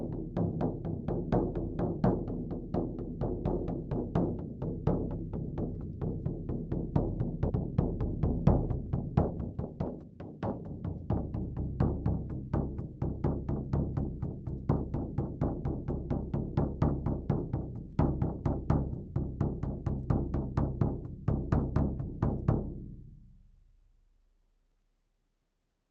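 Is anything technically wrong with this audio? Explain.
Yes, there are two timing faults.

At 7.49 s the sound jumps abruptly forward with no gap. This is a skip ahead: roughly 0.7 s of audio was dropped and both sides joined directly.

From 8.14 s to 10.81 s the sound runs about 9% fast at unchanged pitch. This is a jitter buffer speed-up: the buffer trimmed pitch-period slices, removing roughly a third of a second.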